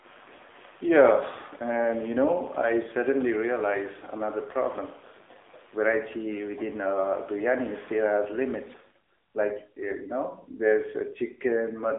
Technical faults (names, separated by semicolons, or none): AMR narrowband mobile codec